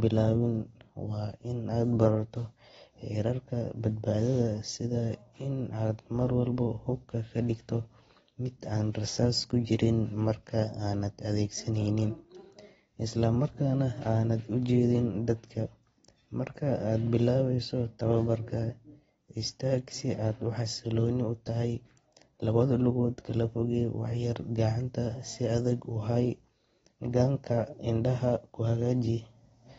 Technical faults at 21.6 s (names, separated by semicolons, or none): AAC compression